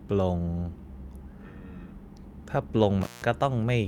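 At 3.01 s an intermittent contact opens for about 184 ms, dropping the speech to faint hiss; the waveform shows a near-flat gap bracketed by crackle spikes until 3.24 s.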